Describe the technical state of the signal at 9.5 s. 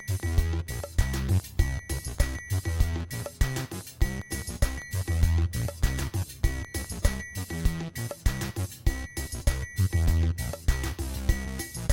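At 9.5 s the signal is intact, with no dropout, distortion, glitch or other fault audible at that moment.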